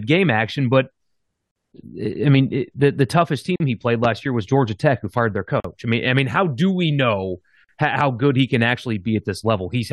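At 1.51 s and 3.56 s, silences of about 45 ms cut the speech. These are gaps at the joins of encoded pieces, each carrying encoder delay and padding. The first comes just before "eh I mean it".

At 4.04 s, right after "he played", a loud pop lands about 10 dB above the speech. It is likely a voltage step from a switch or plug. Speech continues underneath.

The gaps recur every 2.0 s, at 5.60 s and 7.64 s, each with smeared edges.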